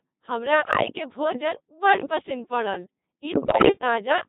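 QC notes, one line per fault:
Throughout: Codec 2 vocoder. The speech is resynthesised from sine waves driven by pitch, voicing, energy and a coarse spectral envelope, so the original waveform is gone. It sounds heavily robotic and buzzy, which fits the 2.4 kbit/s mode. On a spectrogram, the harmonics look unnaturally regular and smeared, with fine detail and breath noise missing. The waveform bears little resemblance to natural speech, showing clean periodic pulses instead of irregular vocal-fold cycles.
0.62–0.96 s and 3.34–3.78 s: bit errors on digital voice radio. Corrupted bits at a rate of a few percent hit the vocoder's frame parameters. The synthetic voice jumps in pitch, level and timbre, breaking into warbles and bleeps, the second burst longer and worse. The first ends just before "भोजन बड्ड पसिन्न पड़ल", and the second starts right after it. A spectrogram shows abrupt frame-to-frame steps in harmonic spacing and formant position, and the waveform envelope lurches erratically.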